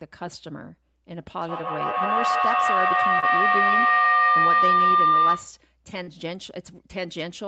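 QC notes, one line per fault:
1.38–5.60 s, feedback howl: two devices in one room on the same call form a microphone-to-loudspeaker loop with gain above unity. Repeats grow into a tone around 1 kHz, repeating roughly every 150 ms and peaking about 11 dB above the speech.
3.19–3.24 s and 6.03–6.09 s, short concealed packet loss: audio arrived too late for the decoder. The receiver extended the preceding sound for about 28 ms and 40 ms, heard as brief smears.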